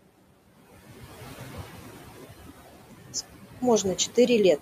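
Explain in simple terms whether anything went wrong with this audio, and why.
A noise suppressor has been working on the whole recording, and you can hear its artifacts. The background room hiss drops away in the pauses and creeps back in underneath the speech, so the quiet behind the voice keeps pumping up and down instead of staying steady.

A block of digital silence cuts in from 3.25 s to 3.62 s. For about a third of a second the audio goes completely dead with no fade. That length fits a 16384-sample buffer that didn't get filled in time.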